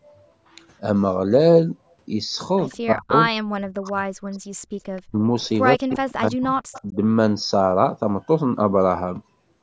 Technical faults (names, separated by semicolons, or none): echo leak; speech suppressed in double talk